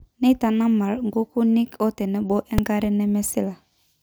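At 2.58 s there's a single sharp bang in the speech: invalid numbers at full scale. Some calculation blew up into infinite or invalid values that got pinned to the maximum level for about 2.7 ms, which fits a 128-sample processing block, so it's too short to be heard as anything but one loud crack.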